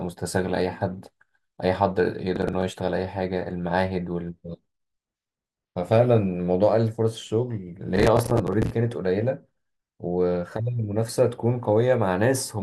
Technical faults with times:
2.36-2.62 processor overload crackle
7.96-8.70 processor overload crackle

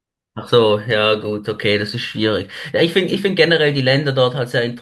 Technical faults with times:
none

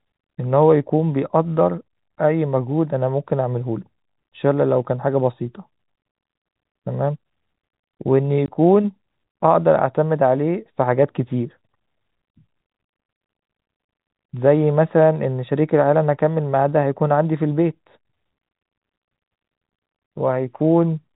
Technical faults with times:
8.46 packet loss filled with silence

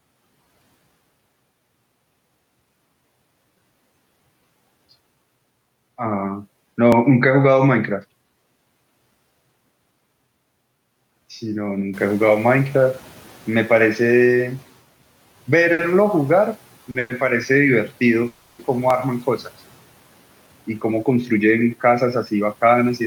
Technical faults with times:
6.92 audio missing between chunks
11.93-14.68 noise suppressor catching up
15.73-15.81 short stall from a late packet
16.91-16.97 short stall from a late packet
16.99-17.12 call audio freeze
18.28-18.61 call audio freeze
18.90 audio missing between chunks
20.70-23.01 jitter buffer speed-up

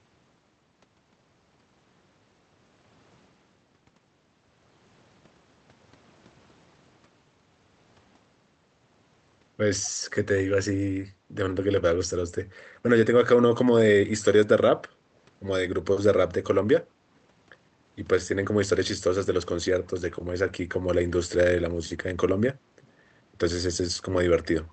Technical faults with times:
9.83-9.90 echo leak
22.82-22.88 echo leak

